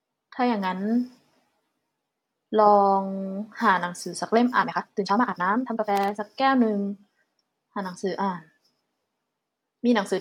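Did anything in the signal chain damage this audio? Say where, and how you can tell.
Yes. From 4.59 to 6.23 s the speech suddenly runs at about twice its normal pace while the pitch holds steady, sounding rushed. That is a time-stretched section, likely from software compressing the segment by discarding short slices of audio to shorten it.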